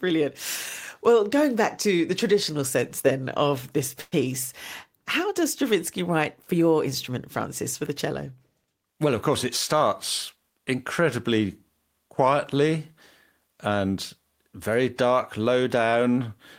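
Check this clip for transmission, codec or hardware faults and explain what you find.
One fault stands out: a call audio freeze in this speech clip.

From 4.01 to 4.14 s, just after "sense then of this", the sound stalls. The likely cause is delayed packets emptying the jitter buffer, so the receiver stretched the last sound into a fading buzz or hiss for about 105 ms, then about 10 ms of silence, before speech resumed intact. Nothing is lost; everything after arrives 105 ms late. A spectrogram shows smeared, fading horizontal bands and a brief blank strip. The waveform shows a decaying tail and then flatline.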